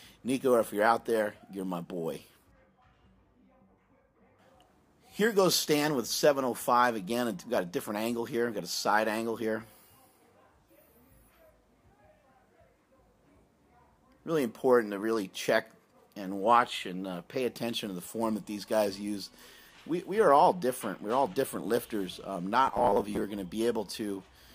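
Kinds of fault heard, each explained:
Robotic sound from repeated short buffers: from 22.67 to 23.24 s the sound turns into a rigid metallic buzz at 100 Hz, consistent with a 10 ms segment looped over skipped audio, likely because new audio arrived too seldom. Roughly two-fifths of that stretch is repeated material.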